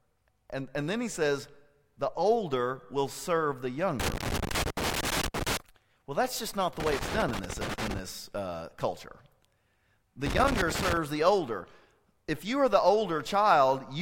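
A speech recording broken by three irregular bursts of scratchy crackle, from 4.00 to 5.57 s after "older will serve the", 6.80 to 7.99 s after "that's just not the" and before "uh culture", and 10.26 to 10.97 s before "the older". This is loose connector crackle: a worn or dirty contact repeatedly makes and breaks, chopping the signal into rough fragments.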